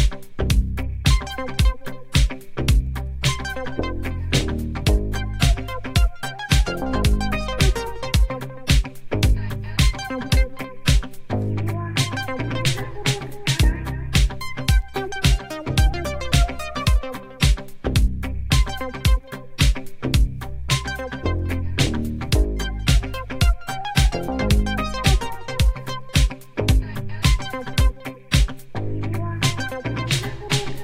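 No technical faults can be heard anywhere in the audio.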